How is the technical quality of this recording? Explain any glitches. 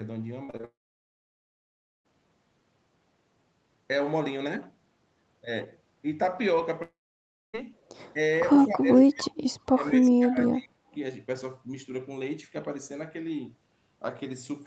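Quality is rough: there's choppy breakup early on, two long gaps, and a stretch where the talker keeps getting ducked. The audio also tops out at 8 kHz, as a call codec would leave it.

From 0.45 to 0.65 s there's repeated packet loss with a robotic sound. Four short holes, the longest about 32 ms, get patched by stretching the last sound, so roughly half that span sounds choppy.

From 0.65 to 2.06 s and again from 6.82 to 7.55 s, a long network dropout is the likely cause. There's a brief fading buzz, then mostly silence, and the audio picks up later with that chunk simply gone.

At 8.14 to 8.19 s, 8.65 to 9.56 s and 9.74 to 10.93 s, the speech dips by about 10, 20 and 30 dB in turn. That's likely speech suppressed in double talk, where the echo canceller turns the talker down while the far side is talking.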